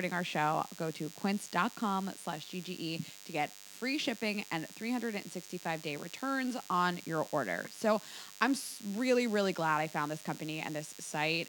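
From the first moment to the last, a DECT cordless phone buzz sits under the speech. It never lets up. A DECT handset or base nearby transmits a short radio burst every 10 ms. The audio circuit rectifies those bursts and turns them into sound. The result is a thin, rasping buzz at 100 Hz, rich in harmonics. It stays steady throughout. It sits roughly 20 dB below the speech.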